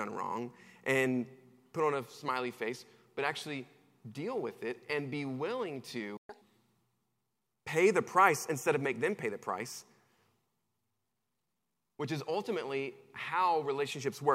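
At 6.17 s the player most likely ran dry of buffered data, or its output thread was held up, so nothing reached the output until it recovered. This is a playback stall: the speech cuts to silence in mid-flow and stays silent for about 120 ms, until 6.29 s. The gap is long enough to hear as a distinct hiccup in the middle of the speech rather than as a click.

From 6.29 s to 6.41 s the player works off the backlog that built up during the stall by resampling it, which produces a catch-up at higher speed. The audio runs at twice normal speed for about 120 ms, so the voice is compressed in time and pitched up by roughly ten semitones, giving a brief chipmunk-like squeak. At 6.41 s the speech drops back to its normal rate and pitch.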